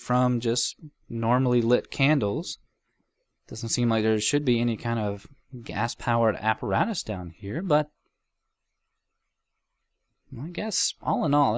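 No technical faults can be heard anywhere in the audio. Nothing in the sound calls for attention from a listener checking for problems.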